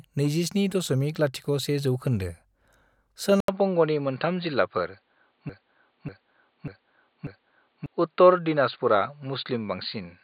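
A speech recording that, at 3.40 s, likely switched its input to a poorer device. An 80 ms silence is followed by sound with nothing above 4.7 kHz and a fresh noise floor about 50 dB down, at much the same level, lasting to the end. The gap and new noise set it apart from a simple filter. From 5.49 s to 7.86 s a broken-record loop repeats one 0.59 s piece exactly, four times back to back. It is likely a stalled stream, not an echo, because the repeats are identical, undecayed, and the audio that belonged there is lost.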